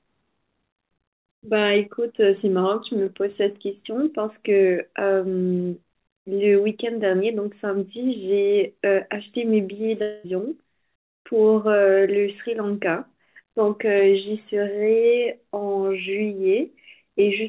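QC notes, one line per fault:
10.02–10.26 s, long network dropout: the speech turns into a smeared, buzzy continuation of the last sound for about 0.22 s, with no drop to silence, then resumes with that stretch of speech simply gone. The likely cause is a run of lost packets. The receiver stretched the final audio it had to cover the hole, then carried on from later material. The call sound around it is narrowband, with nothing above 4 kHz.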